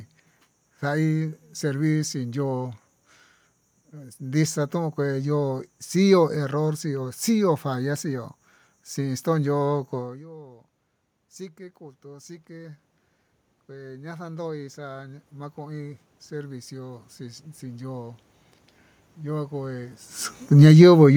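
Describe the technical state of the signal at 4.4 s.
At 4.4 s the signal is intact, with no technical fault, only the room's own background noise under the speech.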